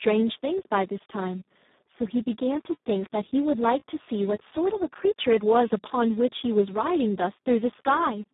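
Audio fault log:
Throughout: Speex codec damage, heavy. The speech is squeezed into a narrow telephone-like band of roughly 150 Hz to 3.7 kHz, with nothing above 3.8 kHz. At a rate that fits about 4 kbps the excitation is starved of bits, so the speech sounds hoarse and noisy.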